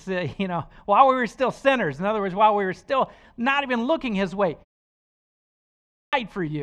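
Clipped start after a pause at 5.66 s: in this speech clip, after about 1.1 s of silence, the first 0.47 s of the next phrase is missing, so the speech resumes abruptly at 6.13 s without its opening sounds. The output device appears to drop into a low-power or unlocked state during the pause and needs roughly half a second to wake and resynchronise, swallowing everything sent before it is ready.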